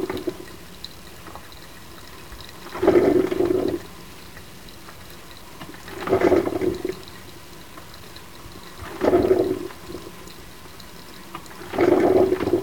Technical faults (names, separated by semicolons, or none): low bit depth without dither